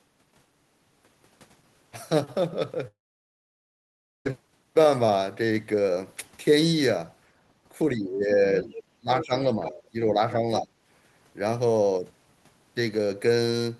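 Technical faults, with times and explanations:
2.87–4.27 s, long network dropout: the sound breaks off, a fading fill gives way to roughly 1.3 s of silence, then resumes further on, likely lost packets.
7.95–8.30 s, 8.63–8.73 s, 8.98–9.75 s, 9.92–10.70 s, speech suppressed in double talk: the voice dips by about 10 to 20 dB in patches, likely the echo canceller ducking during crosstalk.
8.57–8.83 s, 9.21–9.26 s, 9.64–9.82 s, 10.56–10.60 s, other side's voice leaking through: faint scraps of a second voice, about 10 to 15 dB below the talker, likely residual loudspeaker echo.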